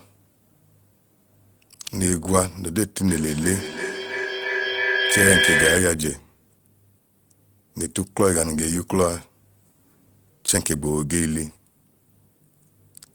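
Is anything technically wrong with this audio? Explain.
Yes. From 3.03 to 6.12 s the speech shows feedback echo between two devices: each sound returns roughly every 300 ms and then returns again. Two devices in the same room are on one call, one plays what the other's microphone picked up, and neither echo canceller removes the other device's output. The repeats grow thinner and more ringing, and they build to about 1 dB above the speech instead of fading. That regular, stacking recurrence sets it apart from ordinary room reverberation.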